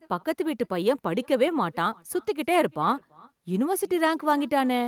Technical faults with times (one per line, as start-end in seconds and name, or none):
0.00-4.88 echo with no canceller